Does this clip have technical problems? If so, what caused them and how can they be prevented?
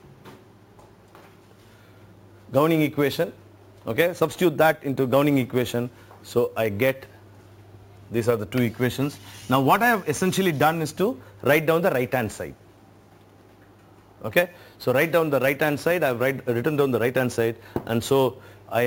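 Yes. Throughout, a bright metallic fizz sits about 21 dB below the sound and follows its level. This is imaging from sample-and-hold upsampling: each sample was simply repeated without smoothing, which points to 16 kHz audio raised to 44.1 kHz, so a mirrored copy fills 8 to 16 kHz. Prevent it by upsampling with a proper interpolating low-pass filter instead of sample repetition.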